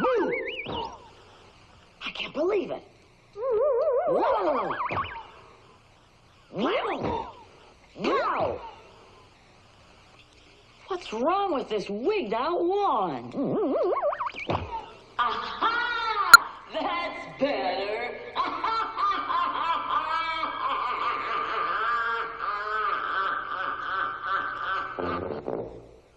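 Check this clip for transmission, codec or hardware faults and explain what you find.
One fault turns up: damaged data in the compressed stream, from 16.34 to 16.36 s. A short stretch of the encoded bitstream arrived corrupted, with bytes lost, zeroed or overwritten. The decoder misread the affected frames, lost frame sync and had to search forward for the next valid header before decoding normally again. On playback that leaves a brief chirp or blip of roughly 24 ms that doesn't belong to the surrounding sound.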